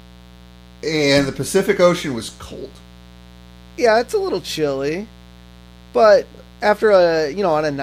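A steady, raspy mains buzz runs under the speech from start to finish, sitting about 25 dB below it. Sharp switching spikes from a dimmer, rectifier or unshielded line arrive twice per 60 Hz cycle, spreading harmonics up to several kHz.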